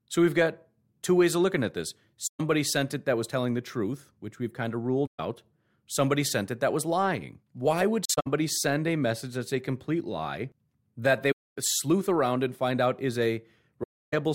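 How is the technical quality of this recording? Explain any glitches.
The speech has five dropouts from AAC frame loss with muting, at 2.26–2.41 s, 5.06–5.20 s (after "which we've kind of"), 8.05–8.27 s (before "send a message that's"), 11.31–11.56 s (between "complete lie that they" and "sleuth around and find") and 13.83–14.14 s. Each time, the decoder had no data for a stretch of compressed frames and filled it with silence. Because the overlapping transform windows taper the signal at each edge, the sound fades out and back in rather than cutting hard, leaving soft gaps.

The gaps range from about 130 ms to about 300 ms, and those sizes fit runs of lost frames of roughly 21 ms each. The 8.05 s event is broken up rather than solid: separate losses spread across about 210 ms, with the longest silent run around 70 ms, so the sound stutters instead of dropping out once.

On a spectrogram, each event is a vertical band blank across all frequencies, with slightly feathered edges. 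On the waveform, the envelope tapers smoothly to near-silence and then swells back.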